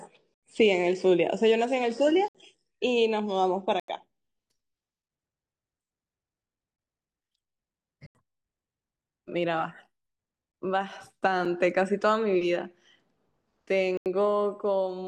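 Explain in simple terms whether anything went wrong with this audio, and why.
Yes, two things went wrong.

This is an adaptive stream starting at a low bitrate. The player began on a lower-quality version so it could start quickly, then switched to a better one at about 4 s. Until then the speech sounds dull, with nothing above 9 kHz, and the switch to clearer sound is sudden.

There are also blocks of digital silence, most likely because the program did not fill its output buffer in time, so stretches of sound were replaced with nothing. Each cuts out abruptly, at 0.34–0.43, 2.28–2.35, 3.80–3.88, 6.76–6.78, 8.06–8.15, 10.52–10.54, 11.45 and 13.97–14.06 s. The longer ones, of about 85 ms, are short holes, and the one at 11.45 s is just a tick.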